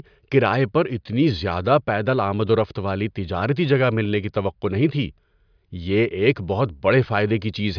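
Nothing in this speech recording trips any alarm, so there's no fault to walk through here.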